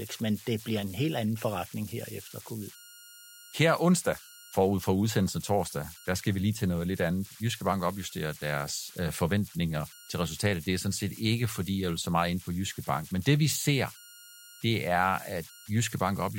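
Converter idle tones run through the whole speech clip: with no dither, the delta-sigma modulator settles into repeating bit patterns at low input levels. This leaves a whistle around 1.5 kHz in pauses and grainy noise under quiet passages, at about -21 dB relative to the signal.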